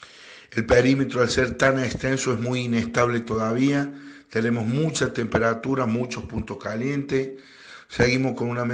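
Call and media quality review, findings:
No dropouts, level jumps, distortion or timing irregularities are audible anywhere in the signal, and the transport and playback path show no faults.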